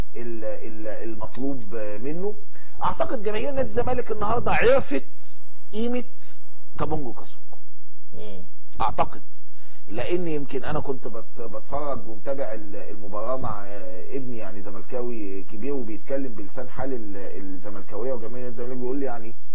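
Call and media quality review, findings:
No audible faults found in this recording.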